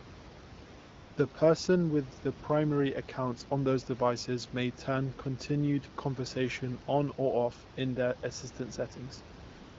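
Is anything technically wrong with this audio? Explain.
Yes. AMR comfort noise appears from 0.79 to 1.17 s and from 9.49 s to the end. The phone detected a pause, stopped sending speech frames, and the receiver substituted smooth synthetic noise for the real room background.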